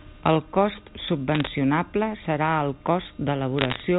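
From 1.32 to 1.47 s and 3.59 to 3.80 s, bit errors on a digital phone line, roughly 0.7 and 0.5 percent, corrupt single samples, producing sharp crackling ticks over the speech.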